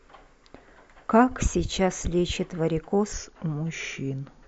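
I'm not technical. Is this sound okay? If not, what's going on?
No. Wrong sample rate, from 3.13 s to the end at 4.48 s. For this last stretch, the speech is played back more slowly than it was recorded, with nothing to correct for the mismatch. Speed and pitch drop together: it runs at about 0.92 times normal speed and sits about 1.5 semitones lower, so the voice sounds a little deeper and draggier. That fits audio recorded at 24,000 samples per second being played at 22,000.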